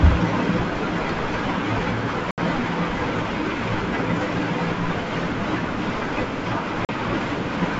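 At 2.31 to 2.39 s the speech breaks off into a hard-edged silent gap of about 70 ms, and at 6.85 to 6.90 s into a shorter 40 ms gap, both from packet loss on an ADPCM call, each spanning several packets. A plain PCM dropout would end cleanly. Here the decoder's predictor and step size have drifted from the sender's, so each gap ends with slightly distorted speech that settles within tens of milliseconds.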